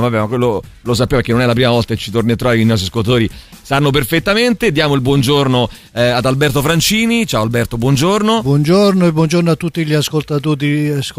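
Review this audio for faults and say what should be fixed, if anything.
Faint crackle rides on the loudest peaks across the whole clip. That is hard clipping: the signal overshoots the stage's ceiling by about 1 dB, so a small fraction of samples, well under one percent, have their tops cut flat, adding high harmonics. Lower the gain before that stage so peaks stay below full scale.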